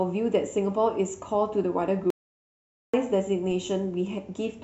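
At 2.10 s the speech cuts off abruptly, and until 2.94 s there's nothing at all. It's not a fade or a quiet patch but dead digital silence with no room tone underneath. That's an audio dropout to silence, about 0.83 s of material simply gone. The likely story is that the input dropped out briefly, maybe a flaky link or a momentary disconnect, while the recorder kept writing silence. When the signal returns, the speech picks up mid-flow.

A little later, at 3.51 s, there's a short low thump while the speech carries on unaffected. That's a DC step: the waveform's zero line suddenly jumps to a new offset, the kind of thing a converter recalibrating or an offset input being switched in would cause. The offset doesn't hold. It bleeds away the way a 20 Hz high-pass would pull it back toward zero, so you hear just the one bump rather than any lasting change.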